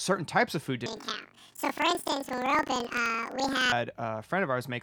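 Speech clip where, right after "types of food", from 0.86 to 3.73 s, planar audio is read as interleaved: 42.67 ms blocks (fitting 2048-sample blocks) play twice at double speed, an octave up, fluttering at 23.4 Hz.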